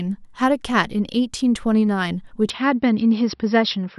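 At 2.5 s the speech abruptly loses its top end and stays that way to the end of the clip: nothing survives above 5.6 kHz, so it turns dull or boxy, with no gap and no real jump in loudness. The likely cause is an input switched to a poorer device mid-recording. What separates this from a simple filter or codec narrowing is the change of tone and the faint new background noise, well below the speech, arriving at the same instant.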